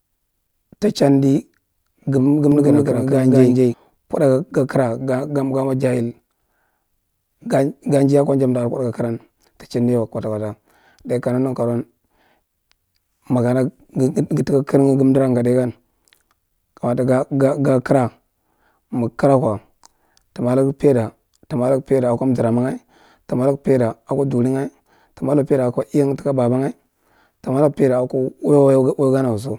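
From 2.52 to 3.74 s the speech has a doubled audio track. A second full-band copy runs behind the first by about a fifth of a second. It sits at roughly the same level as the original. The copy has no decay and no room colour, so it sounds like a hard, separate repeat, not an echo. It starts and stops abruptly. The likely cause is a slower second capture path mixed in alongside the main one.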